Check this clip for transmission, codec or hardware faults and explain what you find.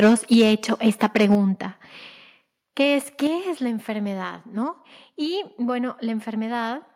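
Two hardware-side faults appear, both tied to the microphone input.

Microphone overload at 0.00–0.53, 0.86–1.35 and 2.80–2.82 s, with peaks pushing about 7, 5 and 1 dB past full scale. It is likely caused by input gain set too high. Flattened, squared-off waveform tops add a harsh crackle, which shows as smeared broadband energy on a spectrogram.

Microphone volume stepped down at 0.34, 1.35 and 3.27 s, dropping about 3, 5 and 5 dB. This is likely automatic gain control cutting input after overload. The waveform envelope shrinks abruptly, and everything sounds suddenly quieter.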